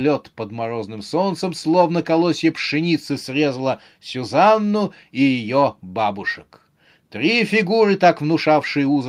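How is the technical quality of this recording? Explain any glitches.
No technical faults are audible anywhere in the recording.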